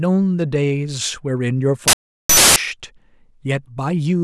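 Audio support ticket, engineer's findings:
Uninitialised buffer, 1.88–2.56 s: digital noise burst replacing speech for about 0.68 s. Output buffer played before being written, fits a 16384-sample block.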